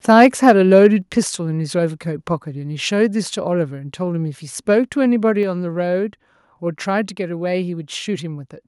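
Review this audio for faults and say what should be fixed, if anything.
Microphone overload, likely from input gain set too high, runs from 0.2 to 0.87 s. Peaks exceed the converter's ceiling by about 3 dB and their tops are sheared off on a small share of samples, so loud syllables crackle harshly. Lower the microphone input level so peaks stay below full scale.

Microphone volume stepped down at 1.02 s, likely the call software reacting to that overload by cutting device gain. Speech and background both drop suddenly by about 5 dB. Set the gain correctly beforehand so automatic level adjustment has no reason to step in.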